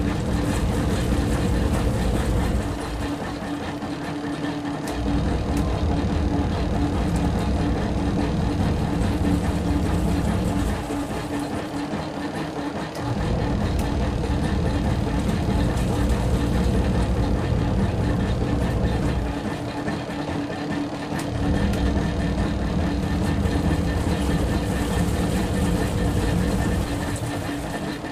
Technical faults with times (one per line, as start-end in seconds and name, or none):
3.39-4.63 jitter buffer speed-up
27.19-28.06 jitter buffer speed-up